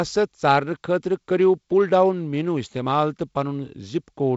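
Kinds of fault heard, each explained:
No faults are present in this speech; it is carried over G.722 wideband telephone coding, with the band stopping at 7.7 kHz and light coding grain in both bands that fits a 48 kbit/s mode.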